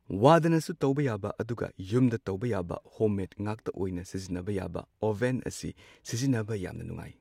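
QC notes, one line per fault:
No faults found on the speech track; nothing to flag for QC.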